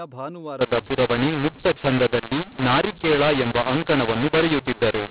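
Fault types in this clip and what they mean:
mu-law and A-law mixed up: from 0.61 s onward, A-law telephone speech is decoded as mu-law, scrambling levels into harsh distortion and lifting quiet passages into audible noise.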